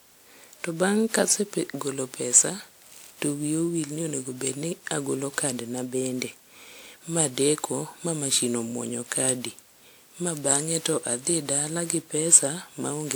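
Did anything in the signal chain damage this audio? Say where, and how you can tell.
Yes. Throughout the speech the sound is swirly, smeared and hollow, with blurred attacks and nothing above about 20.1 kHz, too degraded for a 128 kbit/s WMA-like codec. The likely cause is generation loss, with around ten lossy re-encodes piling up quantisation noise.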